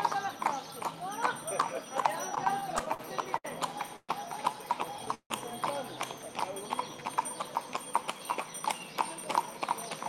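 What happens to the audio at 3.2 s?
At 3.2 s the sound is stuttering from repeated stalls, lasting 2.35 to 3.46 s. Late packets kept emptying the buffer. The last sound was held in ten brief pauses, up to 68 ms each.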